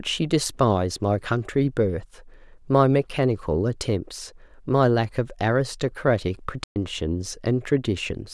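A speech recording cuts to silence in mid-flow at 6.64 s and stays silent for about 120 ms, until 6.76 s, then carries on. This is a playback stall: the player likely ran short of data or had its output thread blocked, briefly starving the output.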